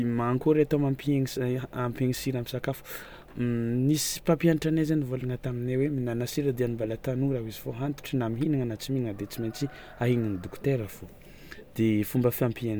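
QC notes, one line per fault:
Nothing stood out on listening to the speech in this clip.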